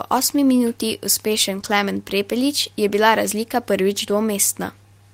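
No technical faults are audible.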